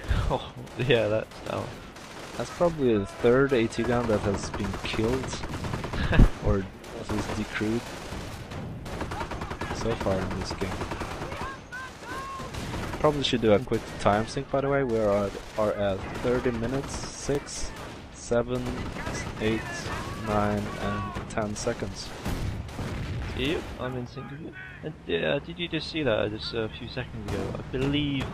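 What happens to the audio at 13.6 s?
Nothing goes wrong at 13.6 s; the audio plays through that moment without any audible fault.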